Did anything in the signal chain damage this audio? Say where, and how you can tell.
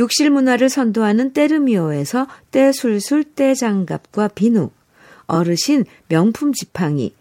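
Yes. The damage sits in the codec or storage stage, as repeated frames. At 5.34 to 5.37 s the speech briefly stutters. One short block plays twice, and the clip gains 23.2 ms. A frame that was written or sent twice is decoded twice, so the listener hears the same slice of sound again before the speech moves on.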